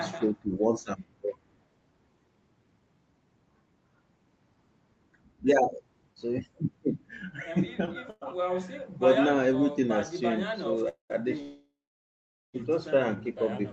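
At 7.85 to 8.01 s there is a short stall from a late packet. A packet arrived late, so the receiver held the last sound for about 17 ms and added about 12 ms overall. It sounds like a brief drawn-out syllable with a faint buzz. On a spectrogram it appears as a short, horizontally smeared slice.

A call audio freeze follows at 8.10 to 8.23 s. There are two more at 10.89 to 11.12 s and at 11.42 to 12.56 s. The likely cause is packets held up in transit, which ran the jitter buffer dry. Each time, the last sound is stretched into a fading buzz and then drops to silence. The silent stretches last about 20 ms, 120 ms and 820 ms, and the longest freeze runs for more than a second in total. Nothing is lost, and the speech resumes where it stopped. On a spectrogram, the harmonics flatten into streaks that fade into a blank band. In the waveform, the envelope decays to near zero, all beneath the Opus path's roughly 8 kHz ceiling.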